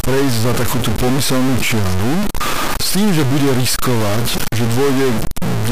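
A stuck bit runs through the whole speech clip, likely one sample bit held fixed by a broken data line or converter. About half the values jump by a high step, about -10 dBFS, giving harsh, buzzy distortion, and pauses fill with loud noise.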